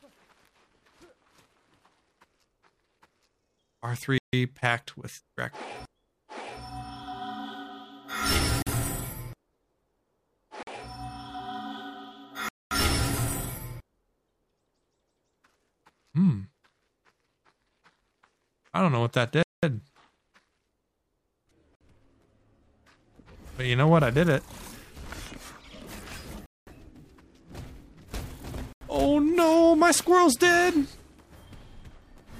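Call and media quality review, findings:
Dropouts to silence, 43 to 226 ms, at 4.18 s, 8.62 s, 10.63 s, 12.49 s, 19.43 s, 21.75 s, 26.46 s, 28.73 s. Likely Bluetooth stall: delayed packets, buffer ran dry, playback paused.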